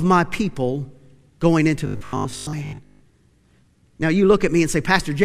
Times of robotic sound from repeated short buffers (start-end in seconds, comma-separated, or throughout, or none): 1.87-3.01